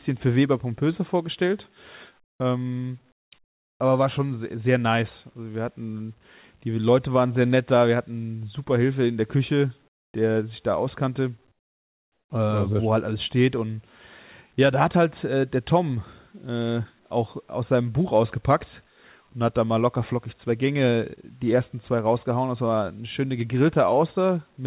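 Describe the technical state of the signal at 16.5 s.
At 16.5 s the speech is intact, with no dropout, glitch or distortion, only the narrow band of the call path, which carries nothing above 4 kHz.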